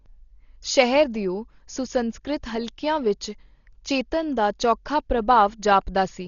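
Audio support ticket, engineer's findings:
Speech dull throughout, nothing above 7 kHz, rough fluttering noise around voiced tones; likely Dolby Digital compression at low bitrate, fits 32 kbps, starved lines dither-filled.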